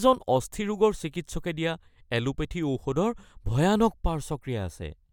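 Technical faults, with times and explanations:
No technical faults are present.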